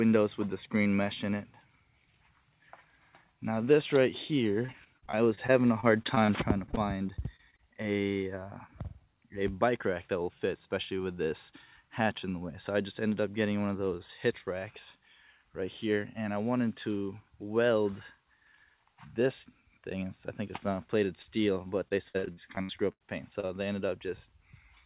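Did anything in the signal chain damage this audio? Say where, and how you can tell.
Yes. The damage happened at the network stage of the call, not in the G.711 codec path, whose 4 kHz band limit is simply how that codec sounds. From 4.66 to 6.30 s, 6.66 to 7.60 s and 21.88 to 23.02 s the audio turns choppy and robotic. These are bursts of repeated packet loss: 12, 7 and 9 gaps, the longest 44, 24 and 80 ms. The receiver patched each hole by extending the last sound, so the concealment buzz fills about 15% of the first stretch and nearly a third of the last.

Three isolated short concealed packet losses appear as brief smears or wobbles. The first is at 21.22 to 21.39 s, where 40 ms never arrived and the patch also stretched the timing by roughly 10 ms. The other two are at 23.40 and 23.47 s, each covering a 20 ms gap. In each case the decoder continued the preceding sound across the missing packet, then blended back into the real audio. 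That blend leaves a short wobble rather than a clean dropout.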